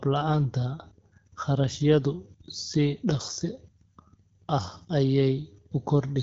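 No technical faults can be heard in the speech. It passes through AMR wideband (HD Voice) coding at 12.65 kbit/s, which leaves only light codec traces and a top band to 7 kHz filled with shaped noise.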